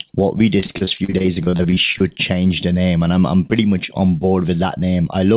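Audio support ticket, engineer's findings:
Repeated packet loss (robotic sound), 0.6–2.17 s, right after "what we". Choppy stretch: around twenty short dropouts, longest 40 ms, about a third of the span filled by concealment extending the last sound. Probable component: network/jitter buffer on the call path. Narrowband top, nothing above 4 kHz, which fits G.711 mu-law.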